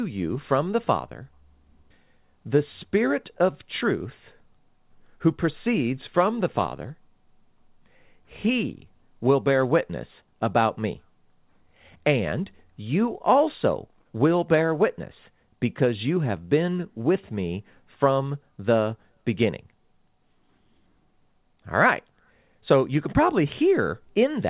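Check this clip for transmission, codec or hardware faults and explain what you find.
No faults can be heard in this speech: it carries the narrowband sound of a normal call path, with nothing above 4 kHz, which fits a 64 kbps G.711 A-law codec working as intended.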